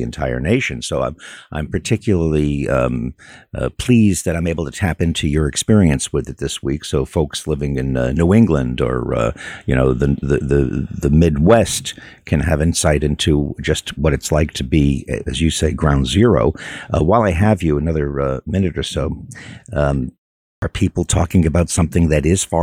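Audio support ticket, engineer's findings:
Clipped start after a pause at 20.57 s: "people talking" begins abruptly out of silence, first 52 ms swallowed after a 0.47 s gap. Output device drops into sleep during the pause and is still waking or relocking when sound resumes.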